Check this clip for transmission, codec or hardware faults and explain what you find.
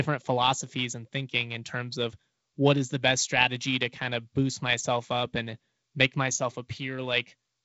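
Nothing stood out on listening: the speech carries the light upper-band hiss and slight lower-band graininess expected of G.722 wideband telephone coding, with content reaching to about 7.7 kHz.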